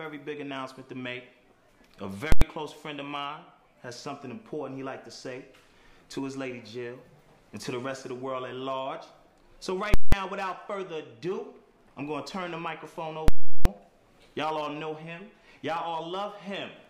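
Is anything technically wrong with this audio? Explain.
Yes. Invalid numbers at full scale occur three times: 2.32–2.42 s (93 ms), 9.94–10.12 s (186 ms) and 13.28–13.65 s (372 ms). A calculation produced infinite or invalid values that were pinned to maximum amplitude for a whole block, with lengths fitting 4096-, 8192- and 16384-sample blocks. Each gives a very loud pop on entry and exit with no sound between. The waveform shows a flat slab at one extreme value, far beyond the audio's peaks, and the spectrogram shows bright broadband stripes at each edge framing an empty gap.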